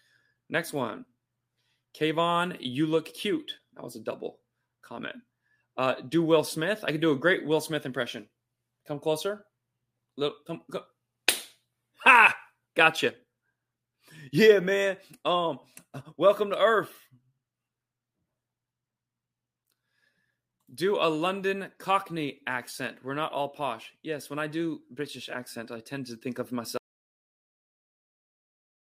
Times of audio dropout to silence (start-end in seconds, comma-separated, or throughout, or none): 26.77-28.98